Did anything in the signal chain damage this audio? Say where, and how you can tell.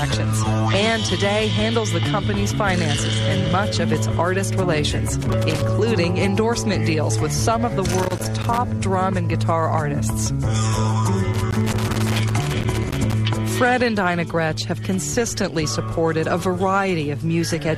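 Yes. Three irregular bursts of crackle and scratching break through the sound at 5.21 to 5.69 s, 7.91 to 8.58 s, and 11.34 to 13.13 s, with the last running nearly two seconds. This is loose connector crackle in the analogue wiring. A worn or dirty contact keeps making and breaking as the cable shifts. That chops the signal on and off in uneven fragments, and any DC on the line turns each break into a pop.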